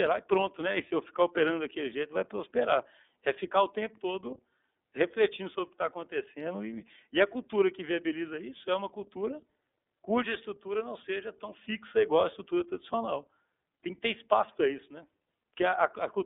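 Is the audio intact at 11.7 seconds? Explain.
No. At 11.7 s the speech carries iLBC codec damage, as it does for the whole clip. iLBC codes each frame's excitation on its own without drawing on the previous frame, and the sound fits its 30 ms frame mode at roughly 13.3 kbps. Everything is squeezed into a narrowband line of about 300 Hz to 3.6 kHz, so the voice sounds thin and boxy, with a plainly audible rough, synthetic grain.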